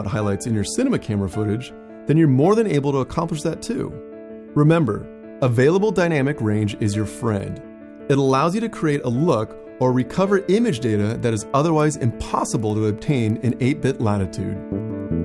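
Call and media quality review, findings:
Resampler restarted on every block, 6.6 s to end: regular ticking at 10 Hz, present only under signal. Each 100 ms block converted 48 kHz to 24 kHz in isolation, so filter edges see false neighbours and leave a small error per boundary. Spectrogram: faint full-height vertical lines every 100 ms. Waveform: tiny discontinuities at block joins. Suspect sample-rate converter state reset.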